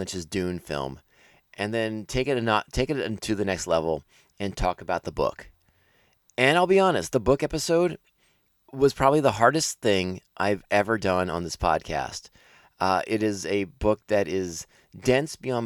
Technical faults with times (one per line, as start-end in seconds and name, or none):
none